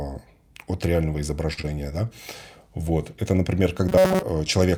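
A short stall from a late packet comes at 1.53 to 1.59 s, right after "от реального". A packet missed its playout deadline, the jitter buffer emptied, and the receiver held the last sound for about 39 ms until the data arrived, then resumed where it had stopped. Nothing is lost, but everything after this point plays about 39 ms later. What you hear is a syllable dragged slightly too long, with a faint buzzy sustain.

Short concealed packet loss follows at 1.61 to 1.75 s, still just after "от реального". Here about 20 ms of audio never reached the decoder, and the receiver bridged the hole with about 22 ms of synthetic continuation, extrapolating the preceding sound before crossfading back into real audio. The gap itself is tiny, but the patch leaves a brief smear and wobble in the sound's texture rather than a clean cut.

Robotic sound from repeated short buffers runs from 3.89 to 4.23 s. 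The sound takes on a rigid, metallic buzz locked at 188 Hz, loosely tracking the original contour. The likely cause is audio arriving too rarely, so the output keeps replaying a stored fragment of roughly 5.3 ms while fresh material is skipped. Around 70 percent of this stretch appears to be such repeats.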